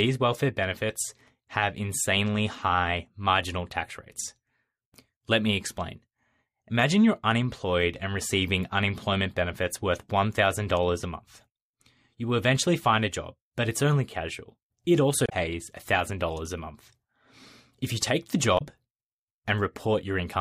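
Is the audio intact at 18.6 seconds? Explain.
No. From 18.55 to 18.62 s, about 70 ms, the speech is broken by damaged data in a compressed stream. Corrupted bytes at that point prevent the decoder from reading its frames correctly, so it loses sync and must hunt for the next valid frame header. The result is a brief chirp, squawk, click or short hole. A simple dropout or concealed packet loss leaves a gap or a smooth patch, but this fault comes from the decoder losing its place in the stream.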